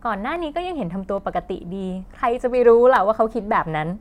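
The stream has most likely lost a few samples at a time, so the waveform jumps straight from one value to a later one. Each gap is only a fraction of a millisecond, far too short to take away any sound. These dropped samples are heard as single sharp clicks in the speech at 0.36 s, 1.18 s and 2.96 s, each a thin vertical line running the full height of the spectrum.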